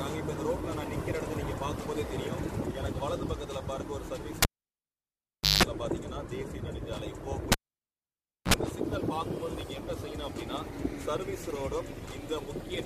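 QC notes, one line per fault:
4.42–5.63 s, cable pulled and plugged in: a sharp pop as the live connection breaks, then about 1.16 s of near silence while the lead is out. On reinsertion, 175 ms of 50 Hz mains buzz as only the tip makes contact, then a second pop as the full signal returns. The waveform shows two spikes bracketing a flat gap. On the spectrogram, the pops are broadband vertical lines and the buzz is a short stack of harmonics on 50 Hz.
7.52–8.54 s, cable pulled and plugged in: the same disconnect pattern, shorter. A pop, about 0.97 s of near silence, then a brief 55 ms buzz, this time on 60 Hz, and a final pop as the audio comes back. The waveform shows a flat dropout between two transients. On the spectrogram, the harmonic stripes are spaced at 60 Hz and are noticeably briefer than in the first event.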